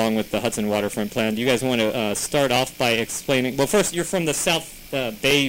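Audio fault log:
1.19–5.31 s, clock drift buffer slips: a click every 1.38 s, likely from two free-running clocks drifting apart, so short blocks of samples get dropped or repeated.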